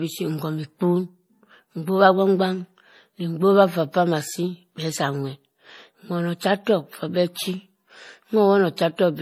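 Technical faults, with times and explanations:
Throughout, transcoding between lossy codecs: the speech has a dull, band-limited top layered with swirling, watery smearing. This is likely MP3 near 40 kbit/s re-encoded as HE-AAC near 48 kbit/s, with the second codec spending bits on the first's damage and adding its own.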